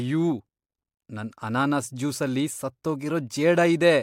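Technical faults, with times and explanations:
Nothing here trips my ear; the speech comes through steady and intact, with no technical faults to point to.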